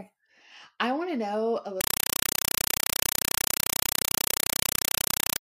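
Compressed stream played as audio from 1.81 s to the end of this speech clip, right after "want to know a". The speech gives way to very loud, chattering static: bursts of noise about 5.33 ms long repeating at 31.25 Hz, each followed by silence. This happens when an encoded Dolby Digital (AC-3) bitstream is passed out as if it were ordinary samples and never decoded. Each compressed frame becomes a burst, and the zero padding fills the gaps. The burst pattern fits a 256 kbps stream.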